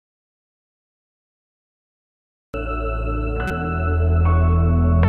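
The audio opens in a dropout to silence already under way: from the start to 2.54 s there is plain silence, with no room tone or noise floor, and the sound then begins abruptly mid-flow rather than fading in. That flat, empty stretch is what an input path delivering nothing looks like, most likely a lost device connection, a broken link or a mute, while the recorder kept writing samples. Whatever was present during those two and a half seconds is unrecoverable. A second fault follows from 3.48 to 3.51 s: a corrupt frame decoded, heard as a short blip or squeak lasting about 30 ms. Its length suggests a couple of compressed frames whose bits were damaged and which the decoder played anyway. Misread gain values and spectral codes put energy at the wrong frequencies for that brief span, producing a burst that does not belong to the surrounding material.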